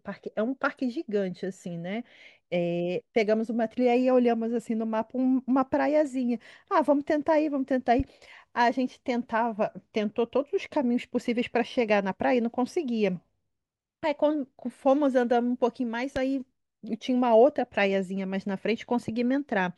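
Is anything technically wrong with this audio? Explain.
Yes. The speech is interrupted twice by a loud pop, a single sharp thump laid over the talking at 8.00 to 8.02 s and again at 16.16 to 16.19 s, with the speech carrying on underneath. The first jumps to roughly 5 dB above the speech level and the second is louder, around 10 dB above. The likely cause is a sudden voltage step or pulse, from a plug, switch, static discharge or driver glitch, entering the signal path and being shaped into a brief burst by the circuitry after it.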